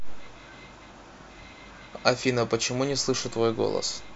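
At 2.91 s the signal's zero reference shifts abruptly, a DC step of about -42 dBFS, as happens when a converter recalibrates or an input carrying an offset is switched into the path. The offset lasts through to the end of the clip. The sudden jump in the baseline is heard as a single low thump or click at that moment, while the speech itself continues unchanged.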